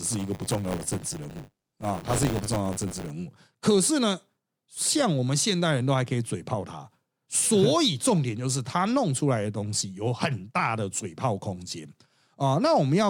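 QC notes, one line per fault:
0.0–3.11 s, buffer tearing: writer and reader cross each 10 ms period, so roughly a tenth of every buffer repeats audio about 20 ms old, producing a steady 100 Hz robotic buzz.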